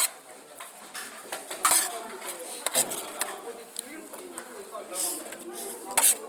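Throughout, tones sound grainy, rough and noisy. This is likely Opus compression in music mode, filling starved bands with noise at a rate near 24 kbps.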